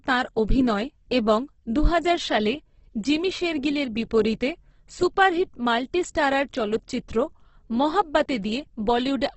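A speech recording carrying heavy Opus compression damage from start to finish, likely from encoding in the codec's CELT (music) mode at a very low rate. Nothing is present above 8.1 kHz, so the band is cut to wideband, and the voice sounds rough and grainy rather than swirly: starved bands are filled with folded or noise-like energy, which turns voiced sounds noisy. The depth of the damage fits a bitrate of around 12 kbps.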